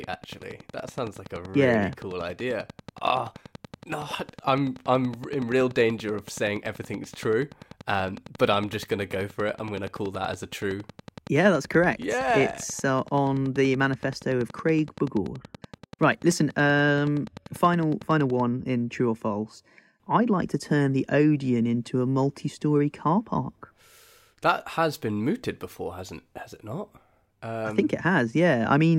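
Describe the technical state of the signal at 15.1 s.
At 15.1 s a train of clicks is running, from 0.04 s until just before "in true or false" at 18.41 s: regular pulses at 10.6 per second, peaking about 5 dB above the speech, likely from interference or a faulty connection or power supply.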